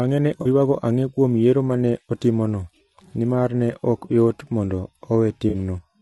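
Throughout, the speech sounds rough and grainy, with noise between harmonics and a thin top band, likely from low-delay AAC compression (AAC-ELD) at a rate fitting about 32 kbps. AAC frame loss with concealment occurs at 0.41–0.46 s, just before "ang'e kuom yiero ma", and at 5.49–5.54 s. Each is a brief smeared, phasey patch about 40 ms long, consistent with two frames filled in from the last good spectrum.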